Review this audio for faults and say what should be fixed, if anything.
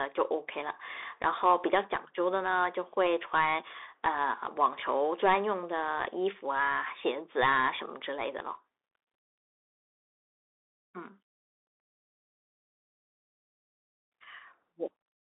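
Throughout the speech, a Bluetooth CVSD headset codec confines the sound to a 300 Hz to 3.6 kHz line band, with nothing above 3.8 kHz. Its one-bit up/down delta coding, which fits a 64 kbps link, audibly scratches sibilants and leaves granular hiss. A spectrogram shows a hard ceiling near 3.8 kHz and a fuzzy noise floor between syllables. Recording over a wired microphone or a wideband Bluetooth mode rather than the headset profile would prevent this.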